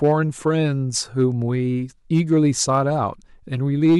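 Brief crackle and grit on the loudest peaks of the speech at 0.04–0.48 s, 1.20–1.23 s, 2.14–2.78 s and 3.84–3.98 s, harshest in the last. This is hard clipping: peaks overshooting by about 1 to 4 dB are sliced flat, adding high harmonics.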